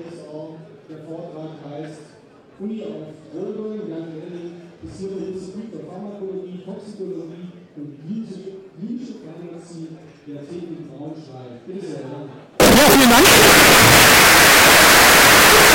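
The audio turns into very loud, harsh distortion from 12.6 s to the end at 15.75 s, with quiet passages as loud as the rest. This is likely a signed and unsigned mix-up in 16-bit samples: the flipped top bit turns each zero crossing into a full-scale jump.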